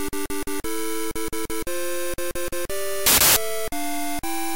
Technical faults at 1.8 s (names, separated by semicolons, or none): none